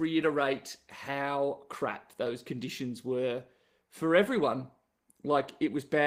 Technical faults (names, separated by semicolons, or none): none